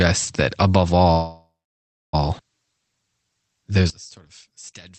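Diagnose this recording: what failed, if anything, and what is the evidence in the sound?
Call audio freeze, at the network and jitter-buffer stage. Right after "that above", from 1.11 s to 2.15 s, the speech stops moving and the last sound is drawn out as a fading buzz, with the final 0.64 s going silent before speech resumes where it left off. On a spectrogram this appears as smeared horizontal bands and then a blank stretch. The likely cause is delayed packets emptying the buffer. About 1.02 s is inserted and nothing is lost.

One channel inverted, at the wiring or channel-handling stage. From 3.90 s to the end the level drops by about 18 dB and the speech turns faint. On the waveform the amplitude abruptly collapses. This fits one channel likely having reversed polarity, so the centred speech cancels when the two channels are summed to mono and only their small difference is left.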